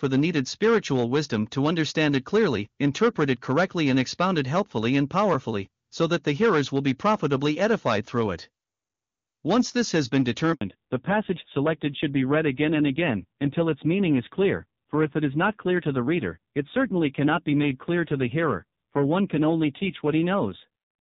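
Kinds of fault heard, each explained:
Handover gap: After "this has been", the speech drops out for 80 ms at 10.53 s while the call switches networks, and those frames are lost.
Fallback to narrowband: From 10.61 s to the end, nothing above 4 kHz remains. The speech turns dull and rough, which fits a low-rate narrowband codec.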